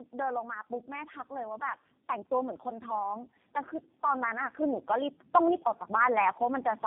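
Throughout the clip the speech shows tandem speech coding. It passed through three low-bitrate speech coders in a row, which fits a chain of AMR-NB, G.723.1 and G.729A joined by G.711 links. Each coder had to rebuild the damaged output of the one before, so errors piled up. The speech sounds rough, muffled and warbly, with nothing above 3.4 kHz.

From 0.11 s to 3.35 s, automatic gain rising sets in. The gain control judged the input too quiet and slowly raised its gain by about 6 dB. The speech and the background noise swell together over those three seconds, with no sudden jump. At 4.0 s it happens again and runs to 6.72 s, this time adding about 5 dB, and the whole sound creeps louder in the same way.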